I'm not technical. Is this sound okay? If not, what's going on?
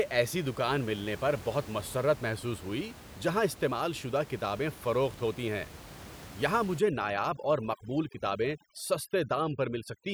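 No, not entirely. From about 6.79 seconds to the end, the speech shows overdone noise removal. A noise-cleaning tool was set too aggressively, so it shuts off narrow slices of the sound wherever they resemble the background noise. The quieter parts of the voice get caught too. The result is a background that drops and breaks up into twinkling specks. The room noise earlier in the clip is simply part of the recording.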